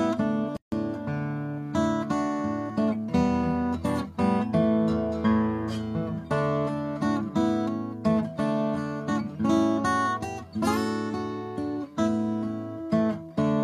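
Two separately encoded pieces were joined at about 0.57 s without trimming the encoder's start-up delay or the padding on the previous piece's final frame. The result is a gap at a join of encoded pieces: a silence of about 155 ms, lasting until 0.72 s. It cuts into continuous sound with edges smeared by the codec, and the audio then resumes exactly where it broke off.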